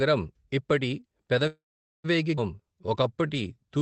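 At 1.47 s the speech stalls until 2.06 s, which sounds like a call audio freeze. Packets were most likely held up in transit and the jitter buffer ran dry. The last sound carries on briefly as a fading buzz or hiss, then drops to near silence for about 450 ms. When audio resumes, it picks up right where it stopped. Nothing is lost; a gap of roughly 570 ms has just been pushed into the middle of the speech.

Shortly after, between 2.36 and 2.39 s, there's a skip ahead. A chunk of about a third of a second was dropped while later audio was already queued, possibly because the buffer overflowed after that freeze. Playback jumps straight forward with only a tiny splice, so the speech on either side is butted together and that stretch simply isn't there.

From 2.56 s to 3.79 s you get a jitter buffer slow-down. The buffer was rebuilding its reserve by repeating individual pitch periods and bits of pauses over and over, adding about 154 ms in total. 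The speech runs at about 88% speed with no pitch drop. Sounds come out drawn-out. All of this sits on top of the band-limiting of the call codec path, which tops out around 8 kHz and fits Opus at a fairly low bitrate.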